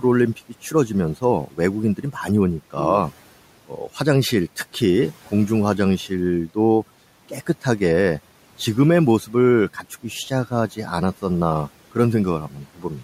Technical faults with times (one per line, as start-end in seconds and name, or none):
12.50-12.85 speech cut by the noise suppressor